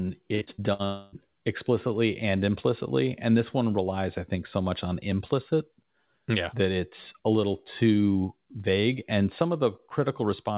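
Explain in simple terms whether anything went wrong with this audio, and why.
Yes, two network faults hit the start of this speech clip, one right after the other.

From 0.35 to 0.82 s there is repeated packet loss (robotic sound). Chunks of audio got lost on the way four times in quick succession, the longest hole about 60 ms. Each time, the receiver papered over the hole by stretching the last bit of sound it had. About a third of that half-second is this patch-up, so the speech comes out choppy and machine-like, with little pieces missing.

From 0.85 to 1.15 s, the sound is replaced by a stretched-out buzz or hiss of the previous sound that fades over roughly a quarter of a second, with no real speech in it. The likely cause is a long network dropout: nothing got through for that stretch, and the receiver kept extending what it last heard. Normal speech returns with "explicitly and implicitly and", and whatever was said in the gap is gone.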